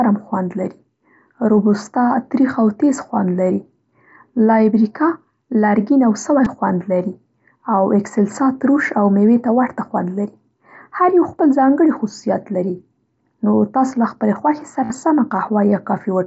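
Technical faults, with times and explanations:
6.45 s and 14.85–14.90 s, concealed Bluetooth headset packet loss: the first gap lasts 15 ms, while the 52.5 ms gap becomes a short buzzy tone at full level, warbling as speech resumes. The phone filled missing headset packets by repeating the best-matching recent waveform.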